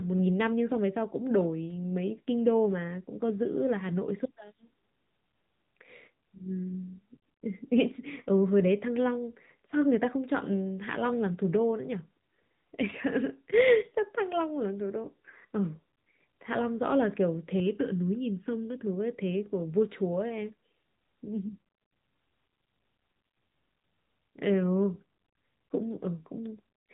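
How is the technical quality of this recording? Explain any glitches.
The recording has two technical faults: an AMR narrowband mobile codec throughout, and a brief spell of channel delay (comb filtering).

Throughout, the speech passes through an AMR narrowband mobile codec, with plainly audible damage consistent with a mid-rate mode near 10 kbps. Nothing above 3.8 kHz survives, so the voice sounds boxed-in and buzzy.

From 17.60 to 18.87 s, there is channel delay (comb filtering). One channel runs under a millisecond behind the other before mixing to mono, which carves notches starting around 700 Hz and leaves the voice hollow and phasey.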